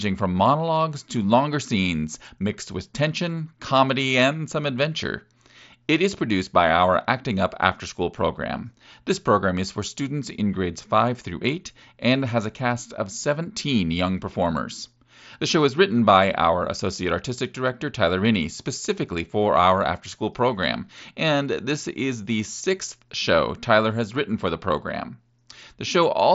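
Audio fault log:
Nothing stood out on listening to this speech, which comes through the Bluetooth mSBC headset codec with its usual 8 kHz wideband ceiling.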